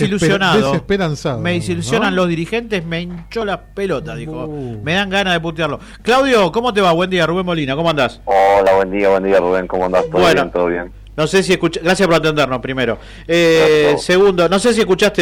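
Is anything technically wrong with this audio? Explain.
Yes. Hard clipping runs through the whole clip: the signal is driven about 7 dB past what a stage can pass, so around one sample in twenty has its peak sliced flat. Those squared tops spray high harmonics, giving a harsh, crackling fuzz on every loud moment. Smooth saturation would round the peaks instead.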